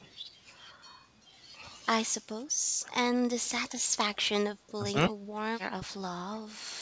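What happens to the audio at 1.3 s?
Between 1.24 and 1.32 s, the echo canceller likely mistook simultaneous talk from both ends for loudspeaker echo and turned the near talker down: speech suppressed in double talk. The speech drops by roughly 10 dB for around 70 ms, a brief sunken gap.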